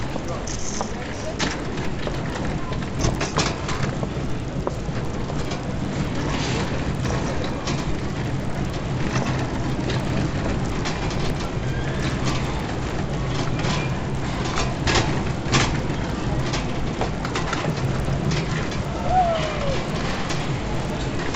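From start to finish, the audio carries a regular ticking at 20 per second, the signature of a resampler restarted on every block. The 16 kHz to 48 kHz conversion was run on each 50 ms block separately, so at every block edge the filter lacked the true neighbouring samples and left a small error. Unlike mains hum or a steady buzz, the ticks vanish whenever the sound falls silent. Their strict 20 Hz spacing also separates them from dropout clicks.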